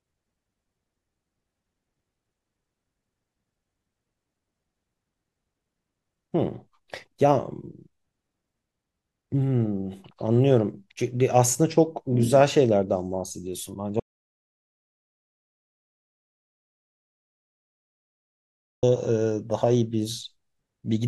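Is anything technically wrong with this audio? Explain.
Yes. An audio dropout to silence runs from 14.00 s to 18.83 s, taking out 4.83 s of the speech. The input was likely lost for that stretch, through a disconnected device, a failed link or an accidental mute, while the recording carried on writing silence. The speech cuts off abruptly mid-flow, and the gap is dead silence with no room tone underneath. Then the speech resumes just as suddenly, and whatever was said during those seconds is missing.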